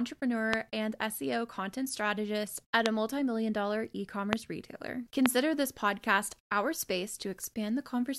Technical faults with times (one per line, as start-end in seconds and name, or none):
0.53-0.55 loud pop
2.86-2.88 loud pop
4.33-4.35 loud pop
5.26-5.28 loud pop